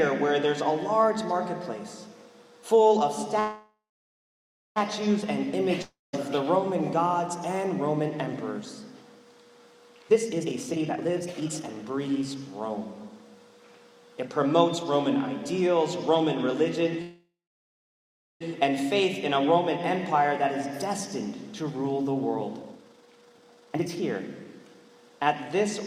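At 3.39 s a call audio freeze begins: the last sound carries on as a fading buzz, then about 0.96 s of silence, and the audio resumes at 4.78 s exactly where it stopped. Held-up packets likely emptied the jitter buffer, inserting roughly 1.37 s of delay with nothing lost. At 5.82 s a long network dropout sounds similar, a brief fading tail then about 0.2 s of silence, but when the audio returns at 6.15 s roughly 0.32 s is simply gone. The likely cause is packets that never arrived, unlike the freeze, where nothing goes missing. From 9.98 to 13.10 s a jitter buffer speed-up runs the audio at 144% with unchanged pitch. Short pitch-period slices are cut repeatedly to drain an overfull buffer, removing around one and a half seconds, so the sound seems hurried rather than chipmunk-like. A second call audio freeze at 17.02 s leaves about 1.07 s of silence before resuming intact at 18.43 s, adding roughly 1.39 s of delay. 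Further speed-ups follow at 22.60–24.02 s, a rushed 189% that trims around one and a half seconds, and at 24.44–25.26 s, a milder 113% that drops only a sliver.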